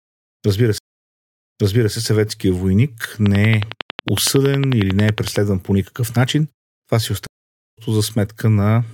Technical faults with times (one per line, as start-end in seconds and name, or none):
0.78-1.94 stream reconnect
3.26-5.37 train of clicks
7.27-7.78 stream reconnect